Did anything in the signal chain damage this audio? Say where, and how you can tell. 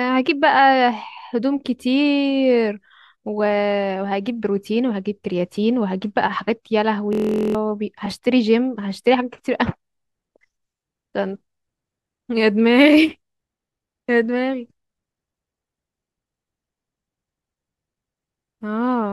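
Yes. A system hang loop sits from 7.13 to 7.55 s, at the driver or buffer stage. The speech abruptly gives way to a steady buzz at 43.1 Hz as one 23.2 ms slice of audio repeats exactly, 18 times over. The host or driver stalled while the sound hardware kept replaying the same ring buffer, which fits a 1024-sample buffer. Roughly 0.4 s of the original speech is lost.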